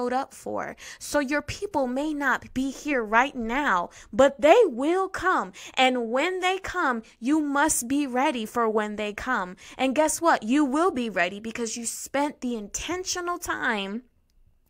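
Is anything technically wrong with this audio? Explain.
No, nothing is technically wrong with this audio.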